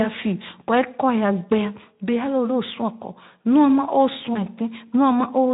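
At 4.33 s the speech breaks briefly. This is VoIP packet loss concealed by the speech codec. About 20 ms of audio went missing, which fits a single lost frame. The decoder filled the gap by repeating its last pitch and filter shape at falling gain. The sound smears into a fading buzzy tone or coloured noise. The disturbance lasts until about 4.42 s, longer than the gap itself. The Speex codec carrying the speech adds only light coding damage around it.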